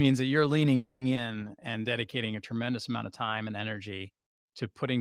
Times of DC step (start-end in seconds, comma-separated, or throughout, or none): none